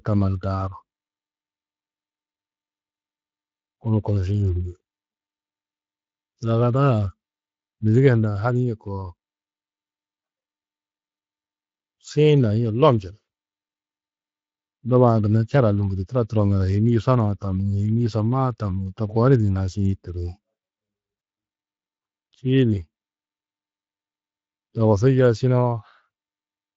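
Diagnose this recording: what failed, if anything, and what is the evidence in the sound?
The failure is in the network stage, with VoIP packet loss concealed by the speech codec. From 21.19 to 21.21 s, about 20 ms of the speech is missing. There is no gap or click. Instead, the decoder fills the hole by extending its last pitch and filter at falling gain. The patch is briefly stretched into a fading buzzy tone or coloured noise, which fits a single lost frame. Recovery takes a little longer, because each decoded frame builds on the one before. The Speex codec itself is running at about 24 kbps with only light damage.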